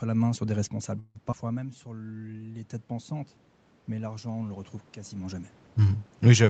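Just after "la main sur des", from 0.71 s to 3.23 s, automatic gain rising sets in. The speech level dropped by about 14 dB, and the gain control slowly brought it back up by about 4 dB. Voice and room noise swell together over more than two seconds. That joint swell separates it from the talker simply moving, which changes only the voice.

Inside that rise, from 0.99 s to 1.17 s, comes a call audio freeze. The last sound is held as a fading buzz for about 156 ms, likely because packets stalled and the jitter buffer ran dry. The speech then resumes exactly where it stopped, with nothing lost, which sets it apart from a dropout.

At 1.31 to 1.34 s, short concealed packet loss leaves a quick smear. About 40 ms of audio never arrived and was patched from the preceding sound. Unlike the freeze, this one actually skips material, and the stream catches back up by roughly 30 ms.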